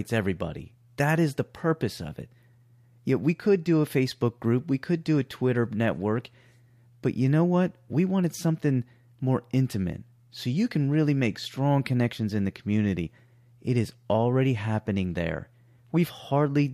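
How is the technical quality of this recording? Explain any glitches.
One glitch is audible, near the end of the speech. At 16.18 s, compressed frames are skipped. About one frame of coded audio never plays, so roughly 20 ms of sound drops out. The audio jumps ahead across the gap.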